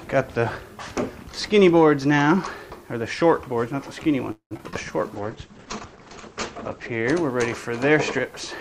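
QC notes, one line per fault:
4.31–4.77 s: repeated packet loss (robotic sound). Four gaps, the longest about 194 ms, are patched by extending prior audio, giving choppy sound with pieces missing.
5.16–7.13 s: call bitrate drop. The encoder falls from 64 kbps to 10 kbps and band-limits to 8 kHz, so audio turns coarse and muffled.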